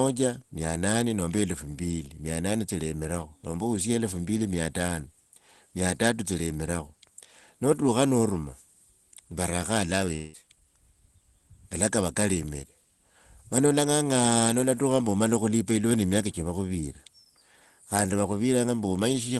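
A long network dropout runs from 10.15 to 10.36 s. For about 180 ms the speech gives way to a buzzy, hissing continuation of the last sound, which fades as it goes, and the speech then resumes with that stretch simply gone. This is likely a gap in packet delivery: nothing arrived for that span, so the receiver stretched what it last had, and the missing audio was never played. Throughout, the sound is band-limited to about 12 kHz, as fits an Opus call path.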